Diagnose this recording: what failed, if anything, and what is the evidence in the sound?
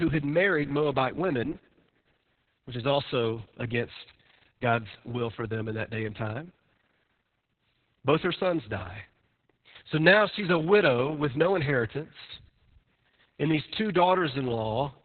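The codec stage failed: heavy Opus voice compression runs through the whole clip. Nothing remains above about 4.3 kHz, and the speech sounds muffled and hoarse. That fits narrowband SILK coding at a very low bitrate, around 6 kbps, with a coarsely coded excitation.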